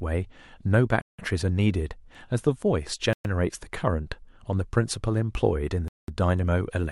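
At 1.01 to 1.19 s, 3.13 to 3.25 s and 5.88 to 6.08 s the speech drops to complete silence for 171, 118 and 201 ms. These are likely Bluetooth stalls, where the headphone buffer runs dry. They are true gaps, not crackle or a brief level dip.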